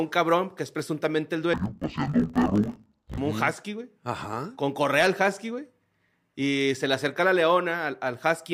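From 1.54 to 3.18 s the speech turns dull and robotic, typical of interleaved audio read as planar. Each 20 ms block of alternating left and right samples was split down the middle, so both halves play side by side at half speed, an octave down. Because the blocks are this short, the sound buzzes at 50 Hz, the block rate, rather than carrying a clear octave drop. Unlike a sample-rate mismatch, the pace stays correct.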